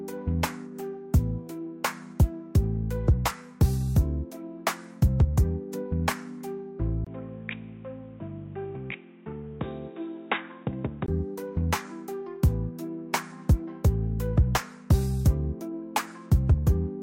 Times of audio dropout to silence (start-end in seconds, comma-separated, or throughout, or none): none